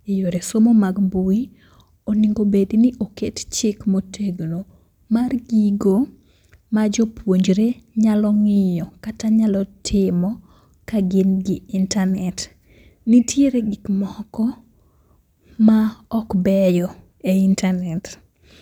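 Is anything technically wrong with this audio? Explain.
No, nothing is technically wrong with this audio.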